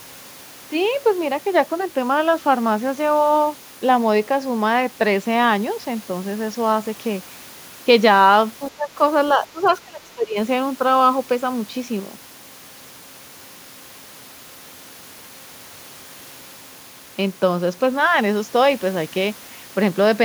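A speech recording with speech suppressed in double talk at 8.71–8.98 s (a dip of about 10 dB) and 9.37–10.37 s (much deeper, around 25 dB), likely from an echo canceller ducking both sides while they overlap; the waveform shows sudden envelope hollows. At 9.64–9.72 s the other side's voice leaks through faintly, about 30 dB below the speech, likely residual loudspeaker echo, showing on a spectrogram as a weak, brief harmonic smear.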